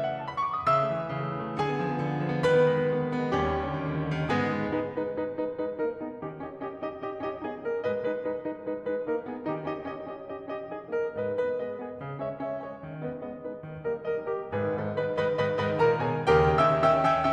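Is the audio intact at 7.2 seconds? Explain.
Yes, the music at 7.2 s plays through intact, with no dropout, click or other fault at that moment.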